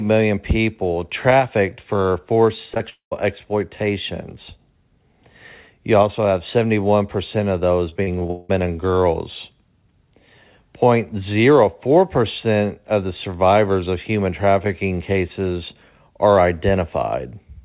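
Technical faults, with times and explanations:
2.74–2.78 s and 2.78–2.82 s, short concealed packet loss: two back-to-back holes of about 20 ms each are patched by extending the preceding sound and blending back. The result is a brief smear rather than silence, which sets it apart from the longer dropout that follows.
2.90–3.13 s, long network dropout: about 0.22 s of audio is lost, likely to a network stall. The patch fades from a continued buzz or hiss into roughly 0.11 s of silence, and the sound resumes without the missing part. Its fade to silence distinguishes it from a short patch.
7.89–8.51 s, repeated packet loss (robotic sound): seven separate holes over about 0.6 s, the longest 182 ms, leave roughly half of the stretch patched. The rapid recurrence, not any single gap, creates the choppy quality with pieces missing, all within a band cut off at 4 kHz.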